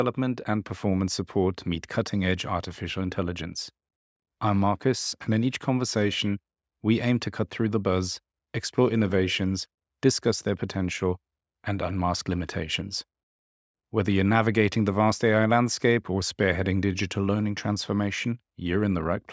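No technical faults can be heard anywhere in this speech. The call microphone processing has trimmed away the lowest bass and leaves nothing above about 8 kHz, as that path normally does.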